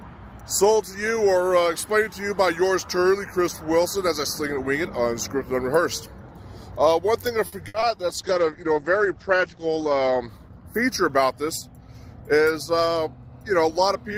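Around 7.47 to 7.54 s there's a short stall from a late packet. A packet turned up late, the jitter buffer ran dry, and the receiver stretched the last bit of sound by about 50 ms before carrying on from the same spot. Nothing's lost, but you hear a slightly held, buzzy moment.

Just after, from 7.68 to 7.76 s, comes a burst of packet loss. About 60 ms never got played. The receiver extended the last sound and let it fade, then jumped ahead, so that chunk is simply gone and you get a brief buzz or hiss in its place.

Right behind that, at 7.80 to 7.84 s, there's a short concealed packet loss. Roughly 20 ms went missing and was patched by continuing the preceding sound, then blending back in. It comes across as a quick smear or wobble rather than an obvious gap.

From 8.09 to 11.50 s there's a call bitrate drop. The bandwidth estimate fell, and the encoder got squeezed, which fits a drop from around 32 kbps to about 10 kbps. 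The top end gets cut off at 8 kHz, and for about 1.6 s at the worst point the sound goes rough and muffled before it recovers.

Finally, 12.22 to 12.46 s shows a jitter buffer speed-up. The buffer had built up extra delay, so the receiver trimmed tiny pitch-period slices over and over, cutting out around 40 ms. Playback runs at about 113% speed with no change in pitch, so it sounds briefly hurried.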